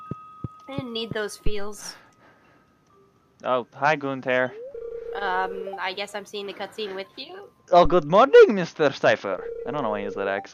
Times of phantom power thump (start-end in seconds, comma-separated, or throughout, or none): 1.47-1.82, 7.85-8.10